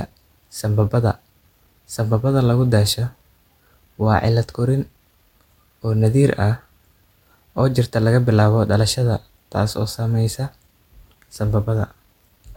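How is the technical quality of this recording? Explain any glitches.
No technical faults can be heard in the recording; the signal stays continuous and stable throughout, with nothing in it that needs explaining.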